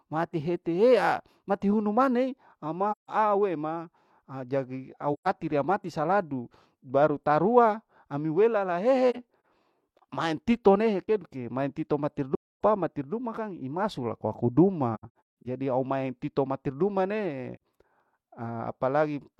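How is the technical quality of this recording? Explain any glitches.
The speech is interrupted by six dropouts from AAC frame loss with muting. They fall at 2.91 to 3.10 s, 5.13 to 5.28 s after "ajadi au", 9.10 to 9.45 s after "baru tarua ami welala", 12.35 to 12.60 s, 14.95 to 15.47 s, and 17.55 to 17.60 s after "maeng titor mati duma". At each point the decoder received no data for some frames and filled them with silence. The overlapping frames fade the sound down and back up, so each gap has soft edges. The 9.10 s and 14.95 s gaps are broken up, with short holes scattered across about 0.34 s and 0.51 s.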